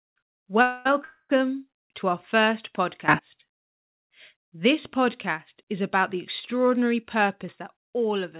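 Speech over a call line, with nothing above 4 kHz, which fits a G.711 call codec. Two call audio freezes occur, at 0.62 to 0.87 s and 1.04 to 1.39 s. Each time the sound stalls and a fading buzz fills the gap, about 230 and 250 ms long. The second ends in a brief silence. The speech then resumes where it stopped, so little is lost. The likely cause is late packets emptying the jitter buffer. A sudden gain jump raises the level by about 18 dB from 3.08 to 3.19 s. Another drops it by about 6 dB from 7.52 s to the end. Speech and background noise shift together, with no ramp. This likely comes from a digital gain change applied instantly.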